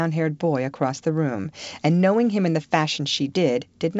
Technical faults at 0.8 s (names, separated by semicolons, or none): none